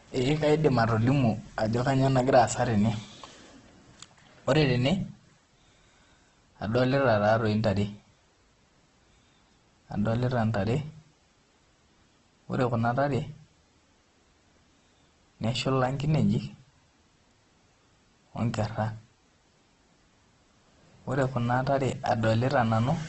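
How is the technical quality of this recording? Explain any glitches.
Poor. Throughout the clip the speech sounds rough, grainy and hissy, with nothing above 8.2 kHz. The cause is likely Opus compression in CELT mode at a rate near 12 kbps: starved bands get filled with folded or noise content, and the bandwidth shrinks to wideband.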